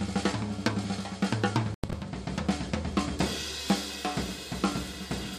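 At 1.63 s, damaged bits in the compressed stream made the decoder reject a run of frames, and the player substituted silence, a corrupt frame muted fault. The sound cuts out abruptly until 1.93 s, a hole that fits about four frames, then resumes on time.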